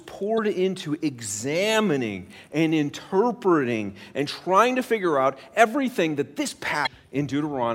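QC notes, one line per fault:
0.35–0.39 s and 6.83–6.87 s, damaged data in a compressed stream: two brief glitches in the speech, the first just before "into examining and interpreting", the second just after "out everything that this". Corrupted bytes made the decoder misread the frames there, lose sync and hunt for the next valid header. Each lasts about 40 ms.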